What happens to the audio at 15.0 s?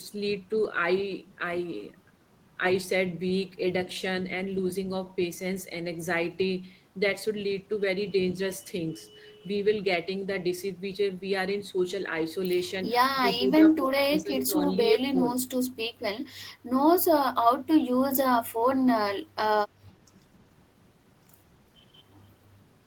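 From 14.99 to 15.16 s the speech sinks by around 20 dB for about a tenth of a second. It is likely speech suppressed in double talk: an echo canceller, hearing both ends at once, ducked the talker along with the echo. It is a level dip, not the hard silence of a dropout.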